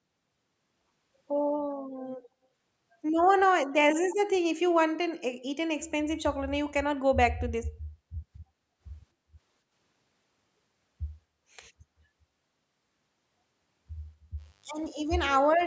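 From 4.1 to 4.16 s, a faint delayed copy of the speech slips through, about 262 ms late and roughly 20 dB quieter. This is an echo leak, likely from a far-end loudspeaker whose echo canceller let part of the pickup return.

From 14.36 s to the end, a steady, raspy mains buzz appears, roughly 40 dB below the signal. Sharp switching spikes at twice the 50 Hz mains rate spread harmonics up to several kilohertz.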